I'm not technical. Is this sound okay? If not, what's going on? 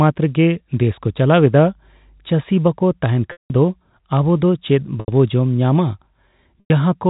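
No. From about 0.97 to 2.47 s, mains hum gets in: electrical power wiring leaks into the recording, adding a quiet, steady low 50 Hz drone.

Packet loss with pitch repetition happens three times: at 3.32 to 3.50 s, 5.00 to 5.08 s, and 6.60 to 6.70 s. Chunks of the speech were lost in transmission, so the system repeated the last sliver of the voice, fading it out. The longest gap, at 3.32 s, fades into a short silence before the speech returns.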